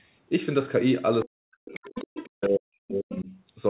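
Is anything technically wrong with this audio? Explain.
Yes. Two faults are audible.

Speech suppressed in double talk, from 1.25 to 1.8 s and again from 2.28 to 3.3 s: the talker's speech drops steeply, by roughly 40 dB at its deepest. Likely cause: the echo canceller couldn't tell this talker apart from the loudspeaker echo while both sides spoke, so it turned both down.

Other side's voice leaking through, from 1.74 to 2.28 s and briefly from 3.12 to 3.16 s: a second voice sits behind the talker, roughly 15 dB below in the first stretch and about 20 dB below in the second. The echo canceller likely did not fully remove the loudspeaker playback from the microphone signal.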